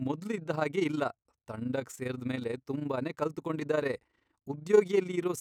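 From start to finish, the speech carries overlap-add ripple. The audio was split into windowed frames and rejoined with an overlap whose windows fail to add up to a steady gain. So the level swells and dips once per frame, by about 11 dB. That happens around thirty times a second. The result is a fast flutter laid over every syllable. It gives the speech a rough tremolo.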